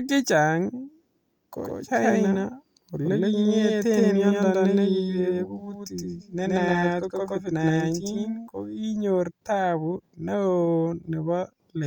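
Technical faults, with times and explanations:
1.64–8.48 s, doubled audio track: the speech picks up a second copy about as loud as the original, trailing roughly a tenth of a second behind. It's dry and full-band and cuts in and out abruptly, likely from a slower second capture path or out-of-step edit.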